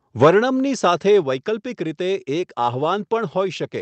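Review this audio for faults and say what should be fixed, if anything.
Microphone overload runs from 0.22 to 0.3 s, just before "સાથે વૈકલ્પિક રીતે". The peaks are flattened at the converter's ceiling, about 4 dB over, on around 7 percent of samples. The likely cause is input gain set too high.

Microphone volume stepped down at 0.24 s by about 3 dB, and again at 1.23 s by about 4 dB, just before "વૈકલ્પિક રીતે". The whole level drops in one jump each time, likely as automatic gain control lowers the device input.

To prevent both, set the microphone input lower before the call so peaks stay below full scale and the software never needs to step it down.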